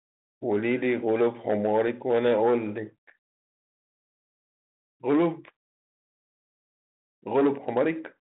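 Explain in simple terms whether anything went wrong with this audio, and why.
Nothing went wrong here; it's just ordinary speech coming through a phone line the way you'd expect, with nothing along the way that stands out as a problem.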